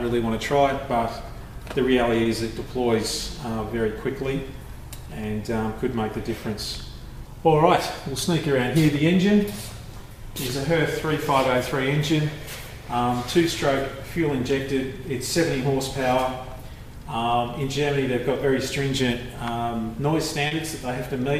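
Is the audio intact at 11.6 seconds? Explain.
Yes, at 11.6 seconds the audio runs on without any audible dropout, click, distortion or other break.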